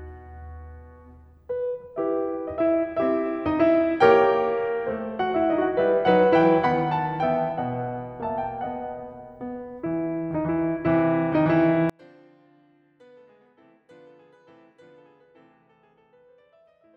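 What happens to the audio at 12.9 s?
From 11.9 s to the end, the music collapses by about 37 dB. This is likely one channel inverted: summed to mono, shared content cancels, leaving only faint inter-channel differences rather than a clean dropout.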